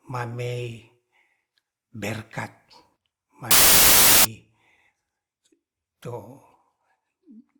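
Wrong sample width from 3.51 to 4.25 s. Across this stretch the bytes are being grouped into samples of the wrong size, which fits audio stored as 32-bit integers but read back as packed 24-bit. Most samples straddle the boundaries of the real ones, so the speech turns into loud, harsh noise with the original buried beneath it. What survives runs at three-quarters speed, so its pitch is lowered.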